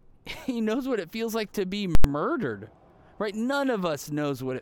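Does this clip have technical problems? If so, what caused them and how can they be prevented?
Yes. Invalid numbers at full scale from 1.95 to 2.04 s: an infinite or invalid calculation pinned output at one extreme value for about 93 ms, consistent with a 4096-sample block, giving loud pops with silence between. Prevent this by checking for invalid values and replacing them before output.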